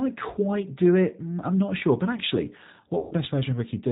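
Speech, carried throughout by the G.729 codec at 8 kbit/s, with plainly audible damage: nothing above 4 kHz survives, and the voice has a rough, slightly synthetic grain from being rebuilt out of a vocal tract filter, a pitch predictor and a few pulses per frame. A plain low-pass filter would only dull the sound, not roughen it. From 2.99 to 3.14 s, just after "actually what", VoIP packet loss concealed by the speech codec takes over. About 120 ms of audio is gone, which fits four lost packets, and the decoder stretches the last sound into a buzzy tone or coloured noise that fades. This differs from a bare dropout, which would leave silence, and the voice stays weakened briefly after the packets return.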